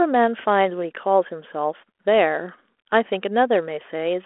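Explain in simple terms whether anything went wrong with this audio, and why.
Nothing went wrong with this speech recording. It travelled over a G.726 ADPCM telephone link like a cordless phone uses, so it sounds narrow, with nothing above about 3.8 kHz and a faint graininess from the coding, which is how that kind of line normally sounds.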